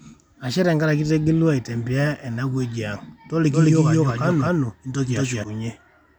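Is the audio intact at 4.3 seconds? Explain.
No. From 3.52 to 5.44 s the speech is a doubled audio track: a second full-band copy runs about a fifth of a second behind at roughly equal loudness, likely from a slower capture path. Unlike an echo, it has no decay or room colour and starts and stops abruptly.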